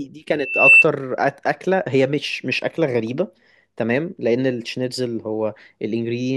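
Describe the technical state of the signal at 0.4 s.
Loudspeaker feedback squeal runs from 0.39 to 0.85 s: the microphone is picking up its own loudspeaker, and at 2.7 kHz the loop gain tops one, so that tone swells over about a third of a second into a piercing whistle roughly 10 dB above the speech.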